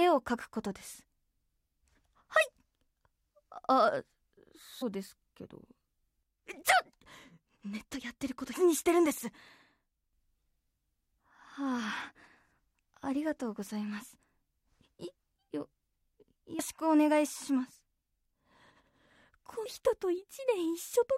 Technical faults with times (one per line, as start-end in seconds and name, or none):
4.81 damaged data in a compressed stream
8.52 damaged data in a compressed stream
16.58 damaged data in a compressed stream
19.65 damaged data in a compressed stream